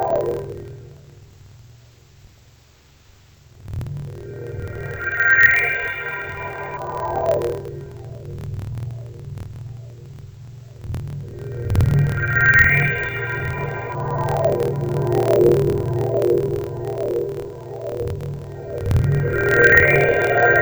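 From start to finish, the sound drops a full octave yet keeps its normal pace, with a doubled, choppy grain. That is interleaved audio read as planar. Each 26.12 ms block of alternating left and right samples is split in half, the first half treated as left and the second as right, so both halves play together at half speed. The chop repeats at 38.3 Hz. Unlike ordinary slowed playback, the timing doesn't stretch.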